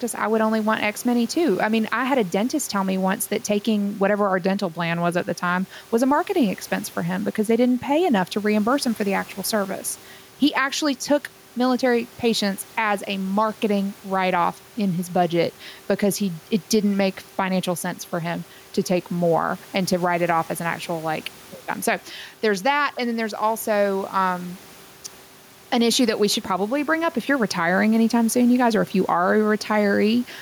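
Throughout, the room noise sits about 30 dB below the speech, while the gain ducks by about 5 dB under each loud syllable, leaving the speech squashed and flat. This is gain pumping, likely from input gain set too high, with a fast limiter clamping each peak.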